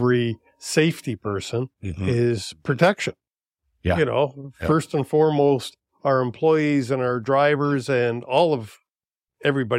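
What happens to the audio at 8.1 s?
Nothing goes wrong at 8.1 s; the speech carries on intact there, with no dropout, click or distortion.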